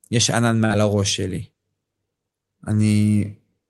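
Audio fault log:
0.65 to 0.72 s, short concealed packet loss. About 40 ms of the call speech arrived too late for the decoder. The receiver covered the gap with roughly 45 ms of invented sound. It extended the preceding sound, using its pitch where voiced and shaped noise where not. Then it blended back into the real signal. The result is a brief smear or wobble in the speech. The rest of the Opus call path tops out around 12 kHz.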